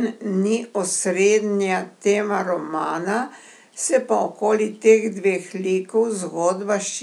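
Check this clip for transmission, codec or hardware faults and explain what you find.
No faults found anywhere in the recording.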